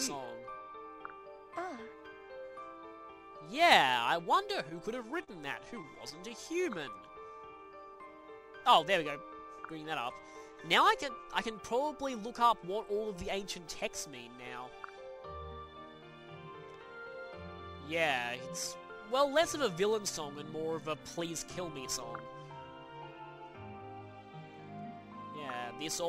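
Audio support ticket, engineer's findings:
Scattered short gaps, 4.69 to 6.89 s. Brief ticks and smears, about ten small holes, the longest around 40 ms, roughly 100 ms concealed in all. Probable component: receiver packet loss concealment extending the last sound. Spectrogram: short smeared or frozen columns, harmonics held flat; waveform shows brief repeated cycles.

Jitter buffer slow-down, 6.37 to 8.23 s. Audio drawn out at unchanged pitch, running at 94% speed, with 115 ms added. The buffer ran low or raised its target delay, so the receiver repeated single pitch periods to rebuild its reserve. Spectrogram: features stretched in time, harmonic spacing unchanged; waveform shows duplicated periods.

Jitter buffer speed-up, 10.34 to 11.52 s at 107% speed, roughly 70 ms removed; 22.04 to 22.41 s at 109%, roughly 40 ms removed. Hurried sound, same pitch. The buffer held excess audio and cut short pitch-period pieces to reduce delay. 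Spectrogram: compressed timing, pitch lines unchanged; waveform shows small splices.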